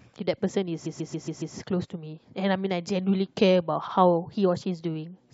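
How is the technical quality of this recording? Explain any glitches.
Two stutters from repeated frames. From 0.85 to 1.54 s, a 139 ms chunk of the speech loops five extra times; at 3.87 s, a 70 ms chunk plays twice. A run of compressed frames got sent more than once, so the decoder replays them, adding about 0.77 s overall.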